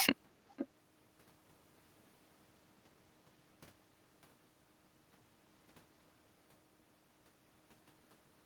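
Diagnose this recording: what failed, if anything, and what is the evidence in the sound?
Call processing failed briefly. From 0.53 to 0.68 s a copy of the speech returns 496 ms late, roughly 10 dB below the direct speech. This is an echo leak, likely from a far-end echo canceller passing loudspeaker pickup. The copy is discrete and late, unlike room reverb's smeared decay.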